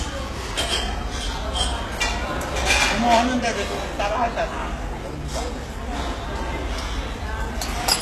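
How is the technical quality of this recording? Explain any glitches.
The quality is poor, with plainly audible damage throughout. Throughout, the treble sounds gritty and metallic, consistent with HE-AAC compression at a very low bitrate, likely around 16 kbps. Copied-up bands smear the top, and a spectrogram shows a flat ceiling at 12.3 kHz.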